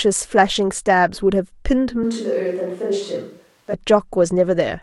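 At 2.04 s the speech abruptly turns roomy and hollow, loses bass, and drops by about 5 dB, with room noise rising to roughly 35 dB below the speech. At 3.73 s it snaps straight back. This sounds like a switch to a distant microphone, most likely because the close microphone's signal dropped out and a farther pickup filled in. A simple gain dip or added reverb would not bring in that jump in background noise and thin bass, or such clean, instant transitions at both ends.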